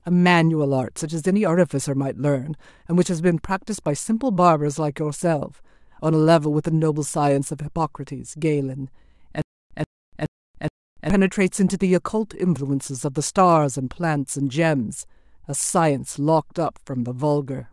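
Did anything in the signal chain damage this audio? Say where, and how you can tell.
Yes. A stutter with silent gaps runs from 9.42 s to 11.10 s in this speech clip. It is likely a stall at playback or in the stream buffer. At each retry the player replays the last fragment it held, a burst of about 133 ms. It then runs dry for about 288 ms of dead digital silence. The cycle repeats every 421 ms, four times, at an even pace. That steady cadence is the giveaway, and the speech that should have filled those 1.7 s is gone.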